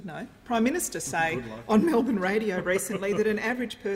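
Nothing technical stands out anywhere in this sound, so there's no problem here to point to.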